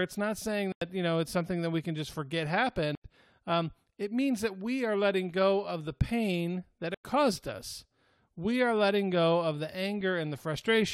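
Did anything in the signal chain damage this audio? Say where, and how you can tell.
Yes. The decoder muted corrupt frames, rejecting damaged compressed frames and filling them with silence. The gaps at 0.72–0.89 s ("not saying" to "you know it's something"), 2.95–3.05 s (after "we can just forget") and 6.94–7.03 s ("of the pain that" to "caused us we are") start abruptly. Each shows as a flat waveform line and a blank full-height spectrogram column.

Corrupt FLAC frames came from storage or decoding. Flipped bits went unchecked, so the predictor rebuilt wrong samples from the damaged bit on. The results are faint errors at 5.32 s (about -51 dBFS) and 10.01 s (about -40 dBFS), visible as tiny waveform spikes and thin broadband spectrogram lines.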